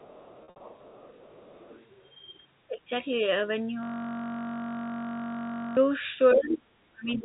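From 0 to 1.91 s a faint second voice, roughly 25 dB under the speech, sits behind the talker: the other side's voice leaking through, likely residual echo the canceller missed. It returns barely audibly at 2.09 to 2.14 s and much louder, about 10 dB down, at 6.3 to 6.55 s. Between 0.44 and 0.60 s, packet loss with pitch repetition scatters 120 ms of gaps, the longest 60 ms, bridged by buzzy held pitch, with the longest gap fading briefly into silence. At 2.68 to 2.9 s the talker dips by around 10 dB, and from 6.35 s to the end by up to about 30 dB. This is speech suppressed in double talk, likely the canceller turning both sides down together, so the loss tracks the overlap rather than random gaps. From 3.83 to 5.77 s a system hang loop repeats one 21.33 ms slice about ninety times, making a steady 46.9 Hz buzz, which fits a 1024-sample buffer. Its exact repetition separates it from packet-loss concealment. 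The G.711 telephone band can be heard stopping at 4 kHz throughout.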